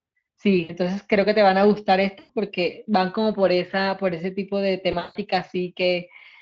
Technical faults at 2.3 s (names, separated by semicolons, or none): VoIP packet loss concealed by the speech codec